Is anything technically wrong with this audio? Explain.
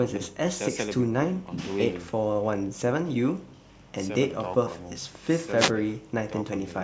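Yes. From 5.57 to 5.72 s the speech is briefly hit by a short swish of static, lasting about 150 ms. This is a wireless microphone noise hit: the analogue FM radio link faded as reflected signals cancelled the direct one, so the receiver's own hiss rose. The call microphone processing, with nothing above 8 kHz, is working normally.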